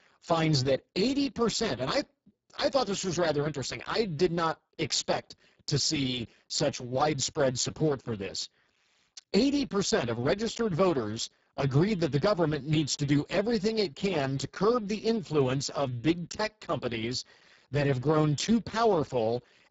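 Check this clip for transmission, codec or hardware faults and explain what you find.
The whole clip has Speex codec damage, and it is heavy from start to finish. The speech sounds hoarse, grainy and noisy, edging toward a robotic, buzzy quality, with nothing above about 7.7 kHz. Speex is a CELP codec that builds speech from a filter driven by a coded excitation signal. The degree of roughness points to a very low setting, around 5.8 kbps, where too few bits remain to describe that excitation accurately, so the fine detail is replaced by coarse, noise-like approximation.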